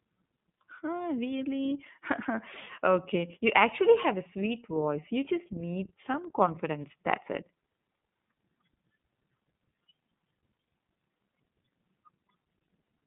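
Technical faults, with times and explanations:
Throughout, iLBC codec: speech is band-limited to 150 Hz–3.6 kHz and coded in independent 30 ms frames, leaving it muffled with a plainly rough, synthetic edge.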